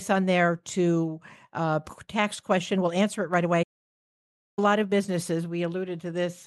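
Right after "on there to uh", at 1.89 to 1.91 s, there's a skip ahead. Roughly 0.4 s of speech never gets played, nothing fills the hole, and the two sides are butted straight together, so the talker seems to lurch forward mid-phrase.

From 2.06 s to about 5.00 s the jitter buffer speed-up kicks in. The receiver keeps snipping out tiny pitch-period slices to drain the backlog, about a fifth of a second in total, so the speech runs about 8% fast at normal pitch and sounds a bit rushed.

Inside that stretch, at 3.62 s, the sound just stops dead for about 0.94 s and picks back up at 4.59 s. That's a playback stall, most likely the player running dry or its thread getting blocked, which leaves a hard gap of silence mid-flow.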